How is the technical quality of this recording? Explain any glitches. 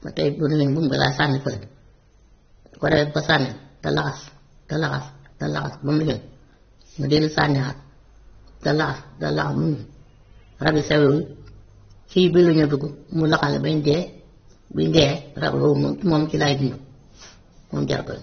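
The technical quality is poor, with one audible fault. Throughout the speech, AAC compression damage is plainly audible: nothing sounds above about 6.3 kHz, leaving it dull, and sibilants take on a smeared, fizzy, warbling texture. This is likely an AAC-LC encode at a low bitrate, consistent with roughly 24 kbps. The encoder has lowered its cut-off and coarsely quantised the remaining spectrum to fit.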